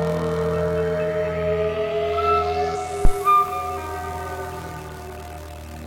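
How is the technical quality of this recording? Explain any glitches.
The music is marred by two brief technical faults close together, one from corrupted compressed data and one from a power transient on the input.

At 2.74 s there is damaged data in the compressed stream. Corrupted bytes made the decoder misread frames and lose sync until it found the next frame header, producing a short glitch. On a spectrogram it shows as a thin broadband vertical smear, and the waveform has a discontinuity.

From 3.05 to 3.13 s a phantom power thump is heard. A supply was switched on or off on the live input, and that voltage step passed through the coupling capacitors as a deep low-frequency thud decaying in about 18 ms. The waveform shows a single low-frequency excursion, and the spectrogram shows a dark burst concentrated at the bottom.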